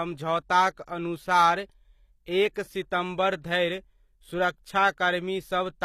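HE-AAC compression runs through the whole speech clip: the treble sounds synthetic, and s sounds come out gritty and metallic. The likely cause is spectral band replication, with upper bands copied up from lower ones under a coarse envelope, as fits a low bitrate around 24 kbps.

Pre-echo occurs from 2.53 to 2.56 s, just before "सितम्बर धरि": a short hiss of about 31 ms precedes the attack, which sounds softened. The codec spread quantisation noise, sized for the loud onset, across its whole block, including the quiet moment before it.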